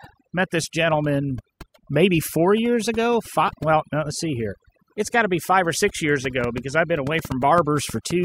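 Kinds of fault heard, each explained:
Overdone noise removal: Noise reduction was pushed far too hard on this speech. Bands close to the noise floor are pulled down or switched off, taking quiet parts of the voice with them. Pauses fall to near silence with twinkling specks.
Train of clicks: Just after "five or six years", from 6.25 s to 8.12 s, a run of around ten similar clicks ticks over the sound. They come at an uneven pace, about 4.8 per second, and peak about 10 dB above the speech. Electrical interference or a faulty connection is the likely cause.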